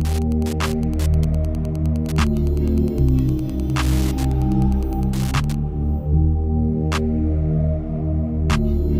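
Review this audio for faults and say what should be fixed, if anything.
From the start to 5.61 s there's Wi-Fi interference: a steady tick every 102.4 ms, so about ten a second, sitting roughly 20 dB under the signal. A nearby radio's beacon is being picked up and rectified by the audio circuit. Keeping routers, phones and other wireless gear well away from the interface and cables, or switching them off while recording, should stop it.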